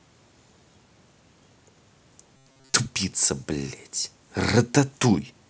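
From 2.37 to 2.74 s the speech turns into a rigid metallic buzz at 133 Hz: robotic sound from repeated short buffers. It is likely caused by audio arriving too seldom, so a block of about 7.5 ms is looped over most of that stretch while real audio is skipped.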